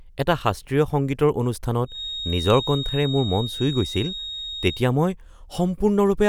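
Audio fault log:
1.84 to 4.88 s, feedback whistle: a thin, steady tone near 3.7 kHz sits behind the speech for about three seconds, somewhere around 10 dB below it and swelling and fading slowly in level before it drops away. The likely cause is a loudspeaker-to-microphone loop held just at the edge of feedback, where gain at that one frequency balances the losses, so it rings on without building into a howl.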